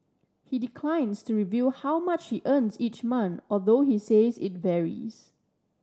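No technical faults are audible.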